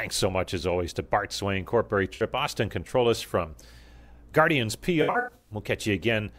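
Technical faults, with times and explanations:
2.14–2.22 s: AAC frame loss with concealment. About 64 ms of audio drops out, which fits three lost frames. The decoder rebuilds the gap from the last good spectrum with randomised phase, so the speech turns briefly smeared and phasey instead of going silent.
5.02–5.52 s: AAC frame loss with concealment. Losses are scattered across about 430 ms and total roughly 300 ms, which points to fourteen frames. The longest gap is around a tenth of a second. The repeated spectral guesses make the speech sound noisy and smeared through the patch.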